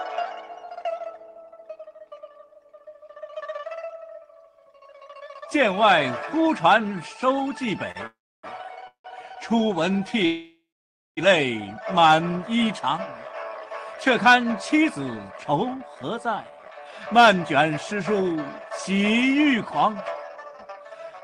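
At 7.91 s a packet arrived late and the jitter buffer briefly ran dry, a short stall from a late packet: the last sound is held about 34 ms too long before the audio resumes.

Three call audio freezes follow, at 8.07 to 8.46 s, 8.87 to 9.07 s and 10.25 to 11.20 s. Each most likely comes from packets held up in transit. The last sound is stretched, fades, then drops to silence for about 290, 110 and 560 ms. The audio then picks up where it stopped.

From 14.82 s to the end, a jitter buffer speed-up trims pitch-period slices to clear the built-up delay. Roughly 0.7 s is removed, so the audio runs at about 111% speed with unchanged pitch and sounds hurried. Throughout, the Opus call path limits the band to about 12 kHz.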